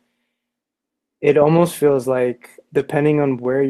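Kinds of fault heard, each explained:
Lost packet rebuilt from error correction: lost packets were replaced by low-bitrate copies carried in later packets, so nothing drops out, but rougher, noisier patches appear at 1.87 s (about 60 ms) and 2.79 s. The waveform stays unbroken; spectrograms show grainy smears, not gaps.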